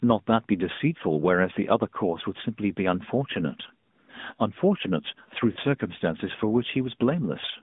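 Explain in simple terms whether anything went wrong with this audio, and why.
The call went through an AMR narrowband mobile codec, which squeezes speech into a thin phone band, so the voice sounds muffled, buzzy and somewhat synthetic throughout.

At 5.52 to 5.59 s, lost AMR speech frames meant the decoder filled a 40 ms gap by guessing, causing a brief warbling dip in the voice.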